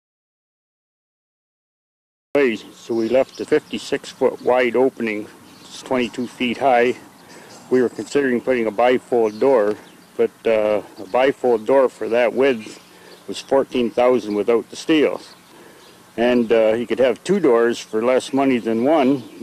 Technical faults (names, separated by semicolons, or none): audio dropout to silence